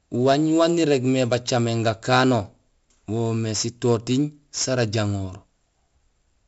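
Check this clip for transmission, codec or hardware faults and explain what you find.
One codec fault runs through the whole clip: 4-bit ADPCM compression. Each sample is coded as a coarse step from a prediction, so loud speech carries a gritty hiss that follows its level, with heavy distortion on sharp attacks. Nothing is heard above 7.7 kHz, which fits roughly 64 kbps at a 16 kHz rate.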